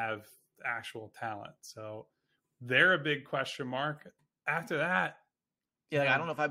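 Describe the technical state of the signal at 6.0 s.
At 6.0 s the speech signal is intact, with no audible technical fault at that moment.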